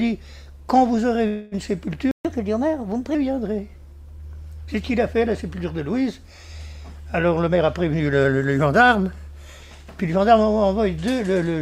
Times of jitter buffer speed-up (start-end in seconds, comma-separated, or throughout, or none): 7.46-8.59